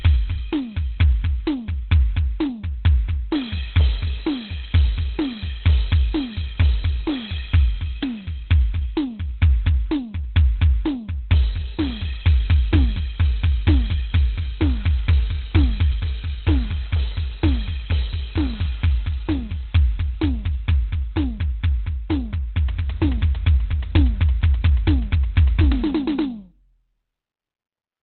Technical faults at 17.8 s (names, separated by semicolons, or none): Opus compression